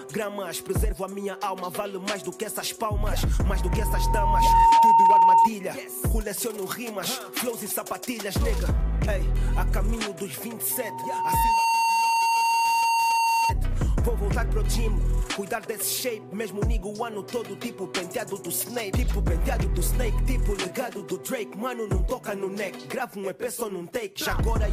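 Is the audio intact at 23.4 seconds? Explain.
Yes, the audio is intact at 23.4 seconds, with no fault audible at that moment.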